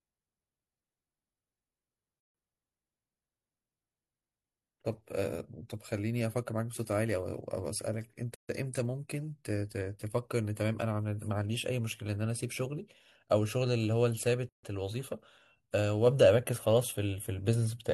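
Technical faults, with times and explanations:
8.35–8.49 s and 14.49–14.63 s, gap at a join of encoded pieces: the speech breaks for a 144 ms gap, its edges smeared so the silent part is shorter, then resumes where it left off, recurring every 6 s. Separately encoded segments were butted together untrimmed, so each one's start-up delay and final-frame padding remain as silence.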